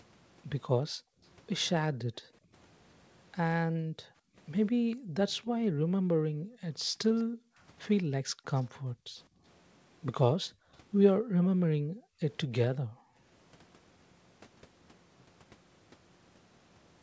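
It's a speech clip with the room background gated by the echo canceller. Whenever the far end's loudspeaker was active, the canceller clamped the mic, and the ambience drops by up to about 40 dB at 0.88–1.22, 1.96–2.52, 3.67–7.62, 8.21–9.43, 10.42–12.2 and 12.8–13.23 s, coming back each time it releases. The longest hole, in the 3.67–7.62 s stretch, adds up to roughly three seconds. At 8.58–8.63 s there's a faint delayed copy of the speech, around 211 ms late and about 35 dB down, likely an echo leak where the canceller let a bit of the loudspeaker pickup slip through. The audio tops out around 8 kHz, which fits a wideband call codec.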